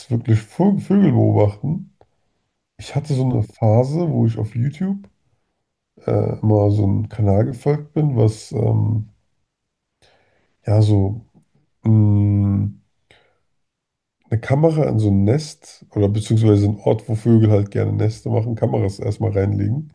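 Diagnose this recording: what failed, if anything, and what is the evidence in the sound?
Nothing failed in this recording, and the sound gives no evidence of a fault at any stage.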